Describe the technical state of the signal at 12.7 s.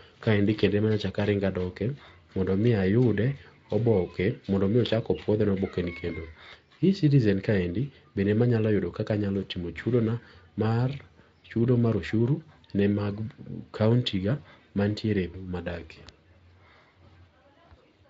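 At 12.7 s the speech is intact, with no audible fault, and the Speex coding at that point leaves at most faint traces.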